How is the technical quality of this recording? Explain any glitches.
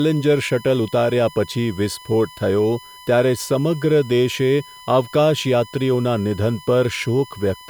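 The recording has one fault. A USB whine runs throughout, a steady 1 kHz tone about 25 dB below the speech. It comes from the USB bus's 1 ms frame current leaking through power or ground.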